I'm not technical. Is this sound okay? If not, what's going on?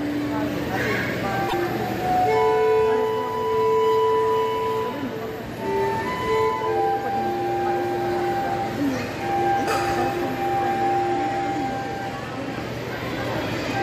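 No. A broken MP3 bit reservoir at 1.48–1.54 s makes the sound briefly glitch and skip, likely because missing MP3 frames left the next ones borrowing the wrong data.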